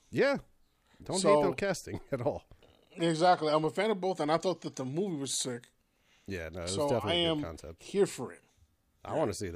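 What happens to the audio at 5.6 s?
At 5.6 s the speech carries on cleanly, with no dropout, click, distortion or other technical fault.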